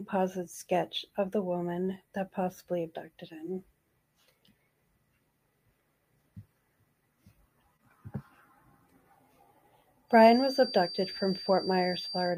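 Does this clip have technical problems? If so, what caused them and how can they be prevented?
Yes. The loop from a loudspeaker back into the microphone was likely sitting just at the edge of feedback, so a single high frequency kept ringing without running away. From 10.07 s to 12.38 s this feedback whistle is a thin, steady tone at 4.7 kHz, about 15 dB below the sound, swelling and fading slowly in level. To prevent it, lower the loudspeaker or monitor gain, move the microphone further from the loudspeakers and point it away from them, or notch out the 4.7 kHz tone.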